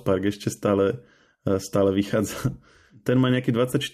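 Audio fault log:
Nothing to log here, this speech clip comes through with no faults to speak of.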